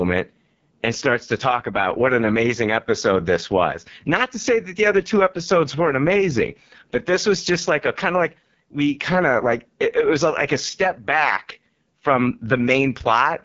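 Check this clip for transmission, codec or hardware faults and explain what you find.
The clip shows one fault, present for its full length: AMR wideband (HD Voice) codec coding of the speech at a very low rate. The codec models the voice below 6.4 kHz with a pulse-excited vocal tract filter and fills the band up to about 7 kHz with shaped noise, so nothing remains above 7.3 kHz. Damage is heavy. The speech sounds rough and raspy, which fits the 6.6 kbit/s mode, the codec's lowest rate.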